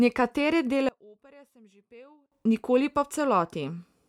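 A speech recording whose centred voice collapses by about 30 dB from 0.89 s to 2.32 s, leaving a faint residue rather than silence. That residue is the giveaway: the likely cause is one channel inverted, so the shared centre cancels when the two sides are summed and only their small difference survives. A true dropout or gain dip would leave silence or a quieter but full-bodied voice, not this faint trace.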